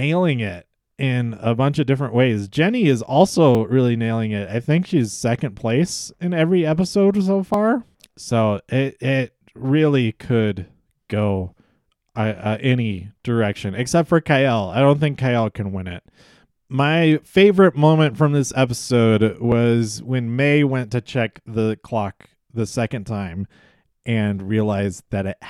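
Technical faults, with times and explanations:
3.55, 7.54, 19.52 and 23.51 s: audio missing between chunks. Brief skips of a few milliseconds fall on a 4-second grid, likely where chunks are joined without a gap.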